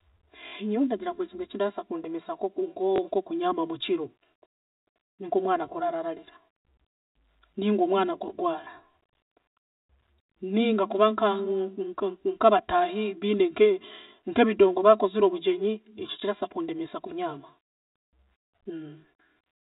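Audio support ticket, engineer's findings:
Channel delay (comb filtering), throughout: hollow, phasey speech with fixed notches, the first near 150 Hz. One channel lags the other by roughly 3 ms before the mono sum, so shared content cancels at evenly spaced frequencies. Probable component: stereo-to-mono downmix or capture path.

Packet loss with last packet repeated: a brief robotic stutter at 0.48–0.52 s (40 ms, which fits two lost 20 ms packets), and small blips at 2.96–2.98 s just before "nkokunyaama mukiro", and 16.2–16.22 s after "nkebidongo baakozire obugyenyi ekyo" (20 ms each). The receiver replays the previous packet out of step with the pitch. Probable component: network path and jitter buffer, on a G.711 mu-law telephone-band stream.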